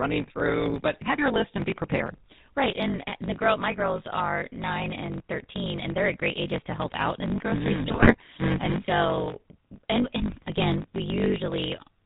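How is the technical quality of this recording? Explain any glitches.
The recording is poor, with three distinct faults.

Throughout, a block size mismatch (truncated) is audible. One stage hands over longer blocks than the next accepts, which fits 1024-sample blocks, and each block's tail is discarded. The cuts produce a steady 50 Hz buzz, and the speech runs 1.16 times fast.

Also throughout, the speech carries GSM full-rate codec damage, consistent with 13 kbps. The codec models the vocal tract and excites it with sparse, regularly spaced pulses, and nothing above 4 kHz survives. The result is a muffled, buzzy, gravelly roughness that is plainly audible.

From 7.86 to 8.25 s, GSM bit errors strike. Corrupted bits reached the decoder and scrambled its filter, pitch and gain values frame by frame. The voice breaks up into squawks, pops and gargling across that stretch.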